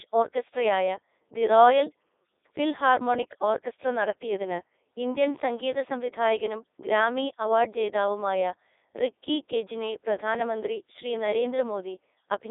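From start to finish the speech has gone through a Codec 2 vocoder. Only pitch, voicing, energy and a rough spectral shape survive, and the decoder rebuilds the sound from sine waves, so the original waveform is gone. You get that robotic, buzzy quality with heavy damage, which fits the 3.2 kbit/s mode. The band sits at roughly 300 Hz to 3.7 kHz, with nothing above 3.8 kHz.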